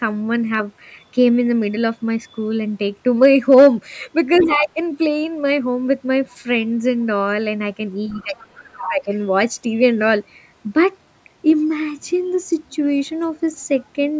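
From 3.22 to 3.68 s, hard clipping flattens the peaks, driven about 4 dB past full scale, giving a crackly edge only on loud moments, unlike the level dips that follow.

At 4.38–4.47 s and 8.09–8.88 s, a second voice about 15 dB below the talker is heard. At 11.62–11.66 s it returns as a faint scrap, far lower. This is the other side's voice leaking through, likely from loudspeaker echo the canceller missed.

Overlapping these, at 4.43–4.79 s and 8.22–9.12 s, the talker's own speech sinks, by roughly 15 dB and then roughly 25 dB. This is speech suppressed in double talk, likely the canceller ducking everything while both sides spoke. The talker drops while the other side is still heard, whereas with clipping the loud parts are distorted but keep their level.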